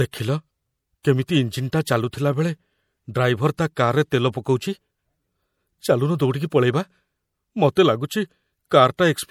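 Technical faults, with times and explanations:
Throughout: MP3 compression, likely from encoding at a low bitrate, around 64 kbps. Short of bits, the encoder cuts the treble and lets weak frequency lines drop in and out between frames, so the speech sounds watery and swirly, with metallic chirps on s sounds and smeared attacks.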